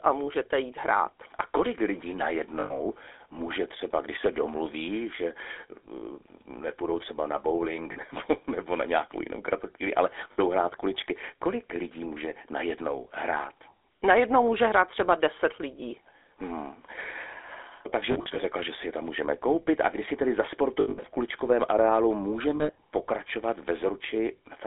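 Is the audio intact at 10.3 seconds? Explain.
No. From 10.32 to 10.39 s there are lost GSM frames. This gap of about 60 ms fits three dropped 20 ms frames, each replaced by the last good frame's settings. It is heard as a brief, rough metallic ring. On a spectrogram the harmonics freeze into flat horizontal bands.

Underneath, the GSM full-rate codec runs throughout, and its sound points to the 13 kbps full-rate coder. A vocal-tract model driven by spaced pulses gives a plainly audible buzzy, gravelly roughness. The band is held to roughly 300 Hz–3.6 kHz, so a spectrogram shows nothing above 3.6 kHz and little below 300 Hz.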